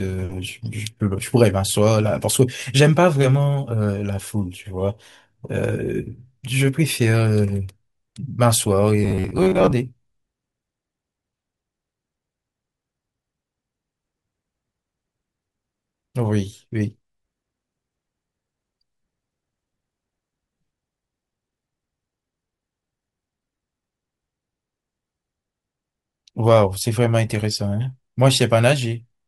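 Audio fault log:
9.04–9.72 s, robotic sound from repeated short buffers: speech turns into a rigid 93.8 Hz buzz, likely from about half the audio being replaced by repeats of a roughly 11 ms buffer.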